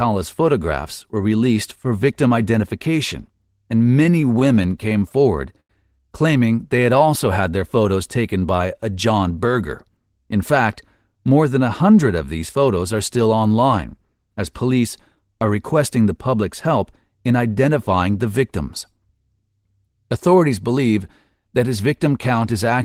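From 4.03 to 5.12 s the speech has repeated stalls, a stutter. Packets arrived late, so the jitter buffer emptied 14 times. Each gap, at most 16 ms, was filled by continuing the last sound. About 13% of that stretch is filled in. It drags and judders.

At 5.60 to 5.71 s there is a short stall from a late packet. One packet missed its slot. The receiver held the last sound for 92 ms until it arrived, then resumed. Nothing is lost, but one sound lingers with a slight buzz or dip.

From 8.17 to 8.61 s a jitter buffer speed-up follows. Too much audio had built up in the buffer. The receiver trimmed short pitch-period slices, about 70 ms in total. Speech runs at 112% speed with unchanged pitch. It sounds briefly rushed.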